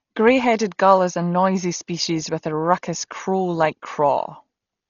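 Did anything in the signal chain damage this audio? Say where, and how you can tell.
Yes, at the codec stage. Throughout the speech nothing survives above 7 kHz, and a rough, fluttering noise clings to voiced tones, likely from Dolby Digital compression at a bitrate that points to about 32 kbps. Unlike a plain low-pass filter, the starved frequency lines are refilled with dither noise, which causes the flutter.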